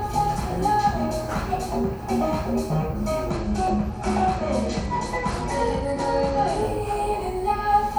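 This everyday-sound recording suffers a Bluetooth SBC bit pool drop from 3.3 s to 6.62 s. The link apparently came under pressure, and the sending device cut the SBC bit pool so the stream would keep going. The sound fits a fall from about 31 to 13, near 94 kbps. Starved of bits, the highest sub-bands are left nearly empty and the rest are quantised coarsely, so the top end turns dull and a gritty grain rises until the rate recovers.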